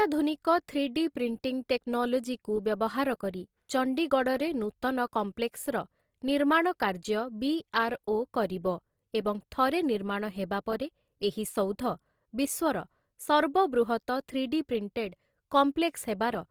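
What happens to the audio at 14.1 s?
At 14.1 s the speech sounds rough and grainy, with a noisy texture on voiced tones, as it does throughout the clip. The likely cause is Opus compression in its music mode at a low bitrate near 24 kbps, filling starved bands with folded or noise content while bandwidth stays full to about 20.2 kHz.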